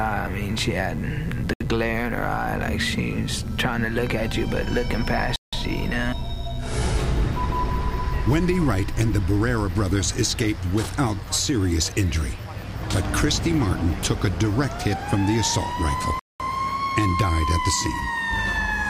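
A steady, raspy mains buzz runs throughout, sitting about 30 dB below the signal. Sharp switching spikes stack 50 Hz harmonics into kilohertz range, drawn as evenly spaced horizontal lines on a spectrogram. The sound cuts to dead silence at 1.54 s for 70 ms, at 5.36 s for 167 ms and at 16.19 s for 205 ms, then resumes. These flat-line waveform gaps are likely Bluetooth stalls, in which delayed packets emptied the headphones' buffer.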